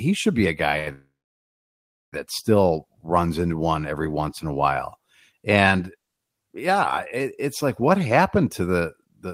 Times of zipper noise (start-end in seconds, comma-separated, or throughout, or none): none